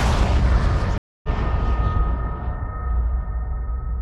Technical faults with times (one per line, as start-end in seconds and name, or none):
0.98-1.28 stream reconnect